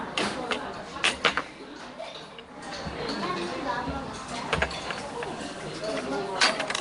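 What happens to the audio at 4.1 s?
At 4.1 s the audio carries the same damage heard across the whole clip, likely Nellymoser compression. Each short block gets a fixed, small bit budget, so weak bands are replaced with noise, leaving a rough hissy halo and a smeared, underwater character. Nothing is present above 10.6 kHz, which fits a rate near 44 kbps.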